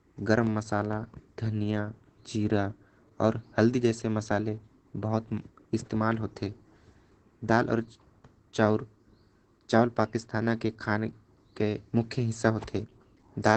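Throughout the speech, Opus voice compression is running its SILK linear-prediction coder at a starved rate, one that fits about 12 kbps in wideband mode. Nothing survives above 8.5 kHz, so the speech sounds muffled, and coarse excitation coding adds a plainly audible hoarse, slightly robotic edge.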